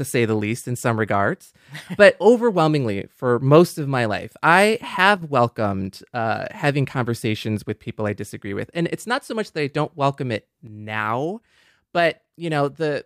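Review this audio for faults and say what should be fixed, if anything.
One channel drops out twice in this speech: briefly from 5.17 to 5.22 s, between "of my life I" and "welcomed uh having conversations", and again from 10.67 s, just after "I don't welcome it", through to the end. Each time the level falls abruptly by about 6 dB, likely because one side of a stereo pair goes silent before the mono fold-down. The waveform shows a sudden step down to half amplitude, and the spectrogram dims evenly across all frequencies. Fix the stereo cabling or interface connection, and monitor both channels before summing.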